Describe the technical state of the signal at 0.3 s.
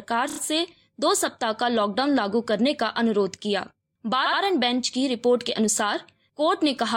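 A short stutter runs from 0.29 to 0.38 s: repeated frames, where a block of about 29 ms plays again several times, adding roughly 87 ms.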